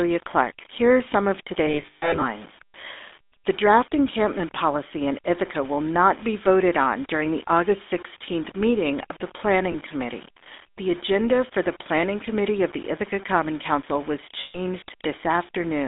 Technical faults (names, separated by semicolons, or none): low bit depth without dither; GSM full-rate codec; lost GSM frames